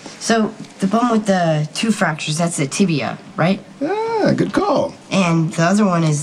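No technical faults are audible.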